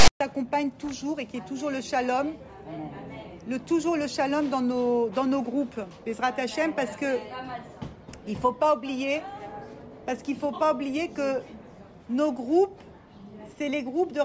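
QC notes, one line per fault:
0.00–0.21 s, file tags played as audio: the clip opens with a harsh, buzzy rasp pulled off to one side, then drops to dead silence before the real audio starts. Tag text decoded as samples gives a lopsided, lumpy waveform rather than even hiss, and the zero padding after it is silence. Unlike a codec glitch or a click, it sits exactly at the file's start with hard edges and contains no broadband full-scale noise.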